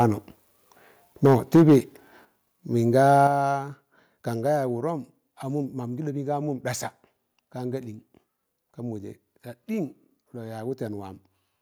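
From 1.25 to 1.76 s the speech shows microphone overload: the loudest syllables turn harsh and crackly, with peaks pushed about 5 dB past full scale and roughly a tenth of the samples flattened. The likely cause is an input level set too high, so the converter cuts off the waveform tops. Unlike codec distortion, the grit tracks loudness directly, sitting only on the peaks rather than smearing the whole band.

The microphone volume stepped down three times, each an abrupt one-step drop in speech and background together: at 1.26 s by about 2 dB, right inside the distorted stretch, then at 2.25 s by about 7 dB and at 3.27 s by about 6 dB. This is likely the call software lowering the device's input volume after detecting clipping. What separates it from ordinary automatic gain riding or a fade is that the level jumps instantly and stays down, with no gradual slope.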